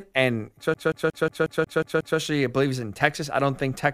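From 0.74 s to 2.19 s the playback is caught in a CD stuck on one turn: a scratch keeps knocking the laser back by one track at the same point on each revolution, so it rereads the same stretch instead of moving on. The result is a 181 ms fragment of speech repeated eight times, each pass cut off by a brief mute at the jump, giving the rapid, perfectly regular stutter of a skipping disc.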